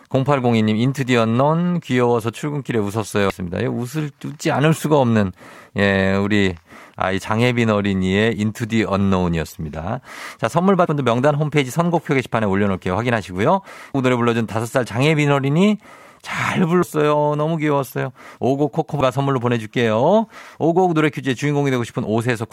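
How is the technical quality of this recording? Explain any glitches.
Quality is undermined by damaged data in a compressed stream at 3.3, 10.85–10.87, 13.93, 16.81 and 19.00 s. Corrupted frames make the decoder lose sync, producing short glitches such as a chirp, squawk, click or brief hole that show as thin spectrogram disturbances and waveform discontinuities.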